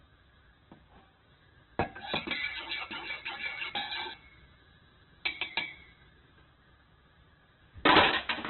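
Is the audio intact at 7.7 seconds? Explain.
No. Throughout the clip, including 7.7 s, nothing sounds above 4.1 kHz and the sound is grainy and noisy, likely from heavy Opus compression at a very low bitrate, near 8 kbps.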